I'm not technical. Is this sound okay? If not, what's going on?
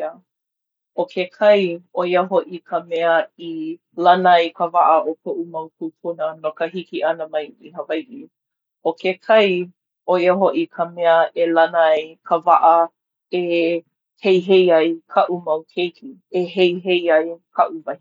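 Yes, this sound is okay, and nothing is going wrong with it.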